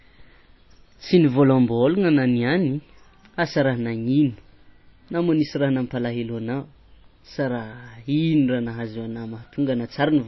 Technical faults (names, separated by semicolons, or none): MP3 compression